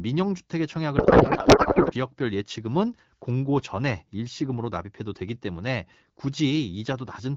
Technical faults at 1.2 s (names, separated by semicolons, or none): codec payload misread